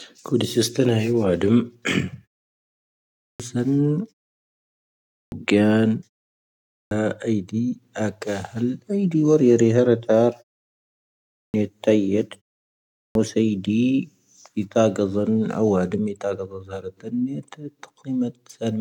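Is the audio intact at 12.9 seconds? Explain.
No, that's inside a clipped start after a pause, 12.68 to 13.15 s: the output device dozed during the short gap and swallowed about 0.47 s, so the speech resumes abruptly.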